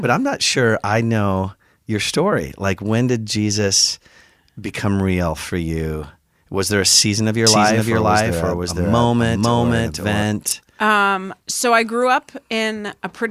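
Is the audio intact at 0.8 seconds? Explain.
Yes, at 0.8 seconds the speech plays through intact, with no dropout, click, distortion or other fault at that moment.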